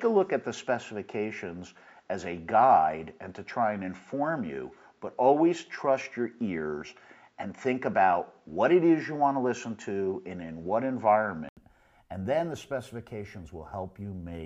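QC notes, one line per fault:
0.00–11.57 s input switched to a poorer device. Sound is dull, with nothing above 7.5 kHz. An 80 ms gap and a level jump of around 5 dB follow, likely a device change.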